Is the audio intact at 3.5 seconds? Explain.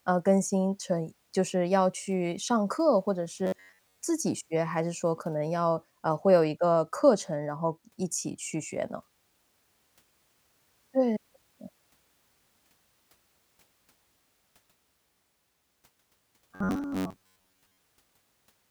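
No. From 3.45 to 3.98 s there's robotic sound from repeated short buffers, a metallic 93.8 Hz buzz, likely an 11 ms chunk replayed.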